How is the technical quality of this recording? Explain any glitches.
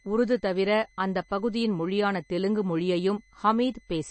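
The recording has two faults running the whole way through. Throughout, a switching power supply whistles, leaving a faint high tone drifting between 2.02 and 2.04 kHz, about 40 dB below the speech. Also throughout, the audio was likely squeezed by low-bitrate MP3 encoding, consistent with about 32 kbps. Nothing remains above 8.3 kHz, and weak components flicker frame to frame, making the speech plainly watery and smeared.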